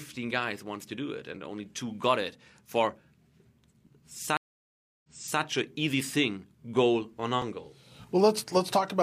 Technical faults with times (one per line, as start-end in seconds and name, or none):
3.87 overlapping chunks
4.37-5.41 stream reconnect
7.42 overlapping chunks